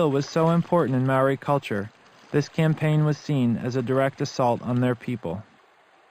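The audio was raised to a higher rate by drawing straight lines between samples, which points to an 11 kHz source brought up to 44.1 kHz. This is imaging from linear upsampling. The weak filtering dulls the top of the band and leaves a faint mirror image between 5.5 and 11 kHz, roughly 30 dB down, heard throughout as a light metallic shimmer.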